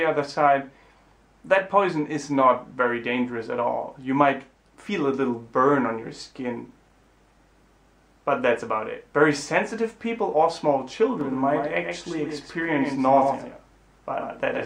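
From 11.21 s to the end, a second copy of the audio sits a fixed tenth of a second or so behind the first, a few decibels quieter, full-band and dry, cutting in abruptly. This doubled audio track is likely from the same signal being recorded twice via a slower path.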